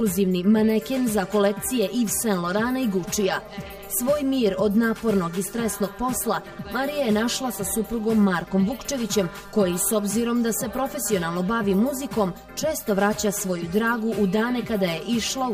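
Channel delay (comb filtering) runs through the entire clip. One channel arrives around 5 ms late, and when the two are summed to mono their shared content cancels at regularly spaced frequencies, starting near 100 Hz. The result is a hollow, phasey sound with fixed notches.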